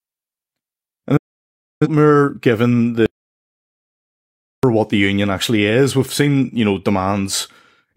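At 1.17 s the speech fades out in about 8 ms: a digital broadcast dropout. The receiver muted corrupt frames. Roughly 640 ms vanishes, which fits about 15 lost frames, before sound returns at 1.87 s.

From 3.06 to 4.63 s comes an audio dropout to silence. The gap is silent with no room tone, likely from a lost input. Speech resumes on "what the union actually".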